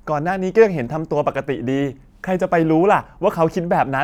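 Speech with no audible faults.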